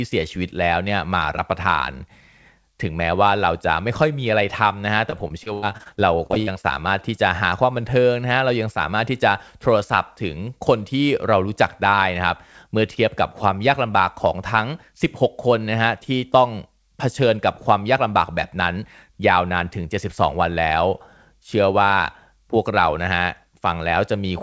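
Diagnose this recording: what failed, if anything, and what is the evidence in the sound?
The network stage failed between 5.10 and 6.66 s. Packets were repeatedly lost or late, and each hole was patched by extending the last sound. About a quarter of that stretch is concealed, with gaps up to 84 ms, so the speech turns choppy and robotic, with pieces missing.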